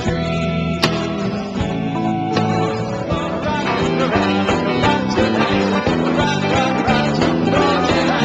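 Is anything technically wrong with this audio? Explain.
No, nothing in the signal points to a technical problem; the recording reaches the ear intact and without any audible defect.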